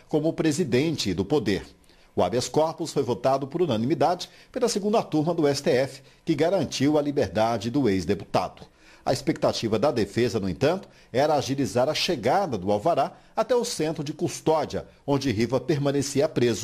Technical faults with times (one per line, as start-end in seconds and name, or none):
none